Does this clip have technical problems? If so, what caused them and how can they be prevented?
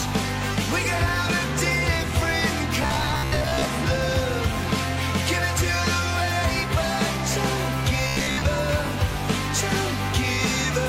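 Yes, there's robotic sound from repeated short buffers at 2.83–3.65 s and 8.08–8.48 s: a rigid 66.7 Hz buzz, likely from about half the audio being replaced by repeats of a 15 ms chunk. Larger buffers or steadier delivery prevent it.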